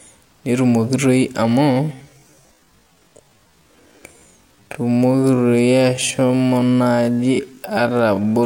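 A speech clip with a time-stretched section from 1.69 s to the end. It slows to about 0.57 times speed, pitch unchanged, so the speech drags, likely from software stretching.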